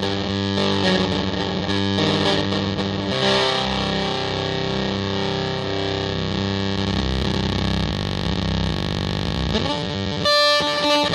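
No technical faults are audible anywhere in this audio; there is nothing to flag or trace to a cause.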